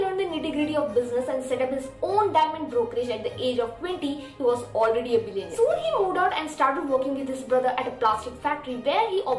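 No technical faults can be heard anywhere in the audio.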